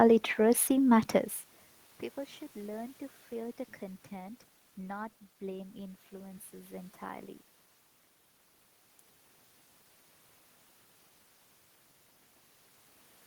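No technical faults are audible.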